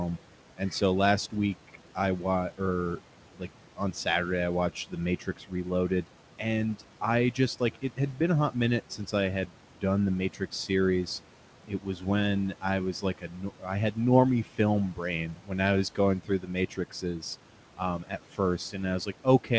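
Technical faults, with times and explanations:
Throughout, noise suppressor artifacts: the suppressor treats steady room noise as something to remove and pulls those frequency bands down by about 12 dB, frame by frame. The background, about 18 dB below the speech, sinks in the pauses and returns underneath the talking, so it seems to pump. The band stops at 8 kHz, as expected from the G.722 call path.
0.57 to 10.7 s, speech cut by the noise suppressor: across this stretch the suppressor mistakes parts of the speech for noise, adding up to well under a second. It turns them down with the background by as much as about 12 dB. Soft consonants and word endings sound swallowed or faded.
11.68 to 19.59 s, speech cut by the noise suppressor: the same misjudgement returns here, with the deepest drops around 13 dB. Quiet sounds and trailing syllables are dipped along with the noise and come across faint.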